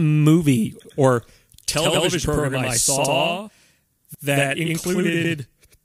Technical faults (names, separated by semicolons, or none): overlapping chunks; channel delay (doubling)